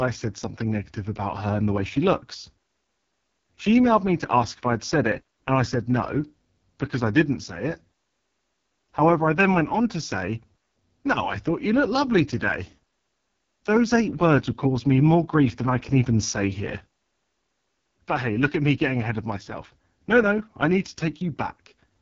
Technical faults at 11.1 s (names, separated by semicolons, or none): AMR wideband (HD Voice) codec